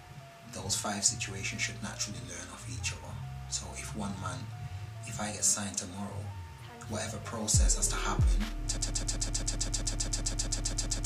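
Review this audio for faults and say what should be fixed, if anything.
Broken-record loop from 8.77 s to the end: a 0.13 s fragment repeats 18 times back to back, replacing the audio that should have played. A stalled player, encoder or stream buffer is the likely cause. Add stall detection that mutes or re-syncs rather than resending the last fragment.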